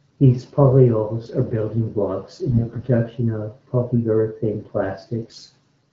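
At 2.52–2.88 s and again at 5.20–5.50 s you get AMR bit errors, roughly 10% then 7% of bits flipped, so the speech goes hoarse and gargly.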